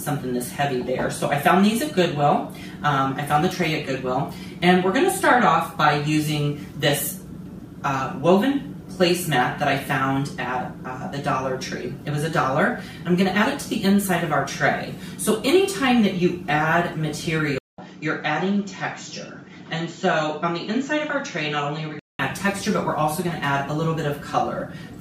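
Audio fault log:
17.58–22.19 s, input switched to a poorer device: after a 200 ms gap the sound turns dull, with nothing above 7.6 kHz, a few decibels quieter, over a faint new noise floor, then clears again. This likely comes from the recording jumping to a narrower-band microphone and back.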